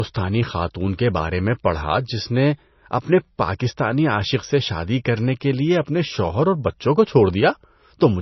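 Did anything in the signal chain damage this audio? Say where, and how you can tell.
Yes. Throughout the speech the sound is watery and swirly, and the top end stops dead at 5.9 kHz. This is likely heavy MP3 compression at the codec stage. A bitrate near 24 kbps would force the encoder to cut treble and drop weak frequency lines frame to frame.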